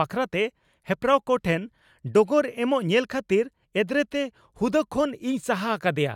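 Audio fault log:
No fault can be heard anywhere in this speech recording. Nothing in the audio calls for an entry in this log.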